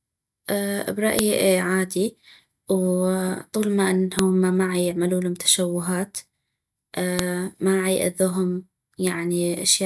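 At 1.19 s a sharp, loud click cuts through the speech. The same snap returns at 4.19 s and again at 7.19 s. This is a file header played as audio. The sound arrives in pieces exactly 3 s apart. Each piece still carries its WAV header. Those few dozen bytes are read as samples, so a brief burst of junk values lands at every join. It snaps regardless of what the speech is doing.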